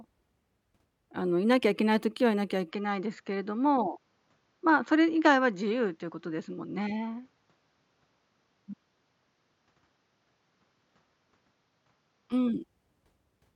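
From 2.71 s to 12.32 s the speech turns duller, with nothing above 7.3 kHz and a faint new background noise well below it, then clears again. The switch is seamless and the level holds steady. The likely cause is the input switched to a poorer device. The change in both tone and noise floor, rather than only a narrower band, sets it apart from a simple bandwidth drop.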